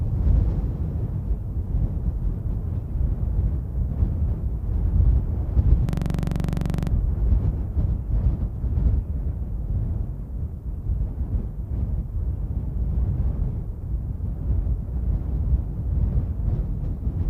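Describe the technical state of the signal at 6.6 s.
At 6.6 s the signal is inside a system hang loop running from 5.89 to 6.91 s. The playback stalled while the hardware kept replaying one 42.67 ms segment, consistent with a 2048-sample buffer, about 24 times at 23.4 Hz, producing a machine-gun stutter at the loop rate.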